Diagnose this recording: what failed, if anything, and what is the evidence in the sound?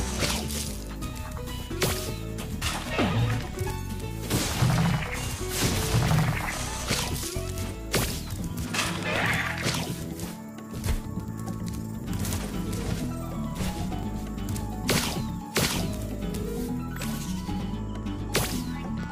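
The driver or buffer stage failed: a periodic USB or driver dropout, where something stalls the audio path at a fixed interval and a couple of milliseconds of samples are skipped. It is heard as a regular tick roughly every 1.0 s, from 0.1 s to 19.0 s, about twenty in all.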